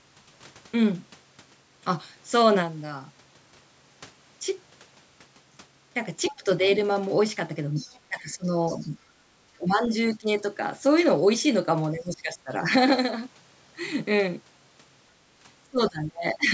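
At 6.23 to 6.36 s a second voice, about 20 dB under the speech, slips in. This is the other side's voice leaking through, likely loudspeaker echo that the echo canceller left in the microphone signal. Right on top of it, from 6.31 to 6.63 s, the talker dips by about 10 dB. This is speech suppressed in double talk, likely the canceller turning everything down while both sides spoke at once. The leak comes back at 7.75 to 7.99 s, again about 20 dB down. The speech then sinks by about 15 dB across 8.08 to 8.81 s, and during that dip, at 8.67 to 8.89 s, the other side bleeds through once more at about 25 dB below. Further suppression dips follow at 9.56 to 10.29 s (about 20 dB), 11.94 to 12.52 s (about 15 dB) and 15.7 to 16.49 s. The last is the deepest at about 25 dB and lasts most of a second. The missing content above 8 kHz comes from ordinary call-band processing.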